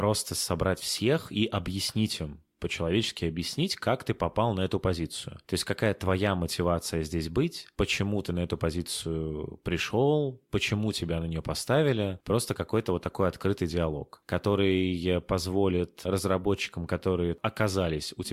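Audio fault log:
3.48–3.57 s, loose connector crackle: a short, ragged burst of scratching lasting about 90 ms, just before "как ты попал на". A worn or dirty contact somewhere in the chain is shifting and repeatedly losing and regaining the connection, so the speech signal is chopped into fragments. The irregular spacing of those interruptions gives the crackling, gravelly texture rather than a single clean pop.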